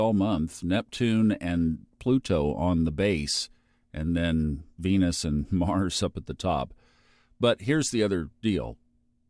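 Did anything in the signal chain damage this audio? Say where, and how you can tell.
No, nothing in this speech recording stood out as damaged by any stage of the signal chain.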